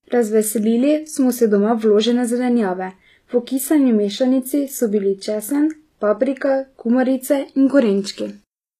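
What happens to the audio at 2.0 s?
At 2.0 s you're hearing HE-AAC compression, which runs through the whole clip. The treble is likely rebuilt by spectral band replication, so the s sounds come out gritty and metallic, with nothing above about 14.9 kHz, consistent with a low bitrate near 24 kbps.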